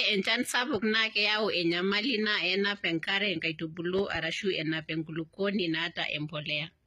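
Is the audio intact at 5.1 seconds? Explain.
No. At 5.1 seconds, as across the whole speech clip, there is plainly audible damage that is likely HE-AAC compression at a low bitrate, around 20 kbps. Only the lower spectrum is truly coded. The treble is rebuilt by copying lower bands upward and shaping them with a coarse envelope, so its harmonics don't line up with those below. Unlike plain AAC or a simple low-pass, which leave the top dull or empty, the treble here extends to about 21.3 kHz but sounds synthetic rather than missing.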